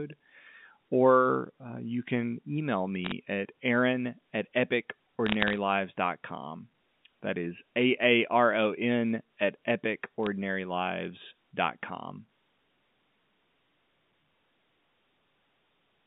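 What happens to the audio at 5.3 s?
Bit errors on the digital phone line, 5.26 to 5.58 s: flipped bits spoil single samples, adding sharp ticks over speech that never drops out.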